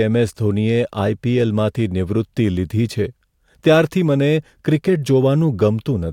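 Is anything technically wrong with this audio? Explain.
No, nothing technically wrong is audible in this speech.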